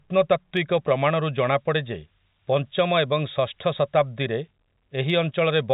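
At 0.57 s a single sharp click cuts through the speech, and another one comes at 5.10 s. Each is a thin, instantaneous tick with no gap after it, which points to dropped samples, likely just a couple lost so the waveform jumps to a later value.

From 1.24 s to 4.02 s a high, thin whistle sits about 30 dB under the speech. Its pitch wanders between roughly 4.16 and 4.71 kHz rather than holding still. That drifting pitch marks it as switching supply whistle, not a fixed electrical tone. The telephone-band G.711 coding, cut off at 4 kHz, works as expected around it.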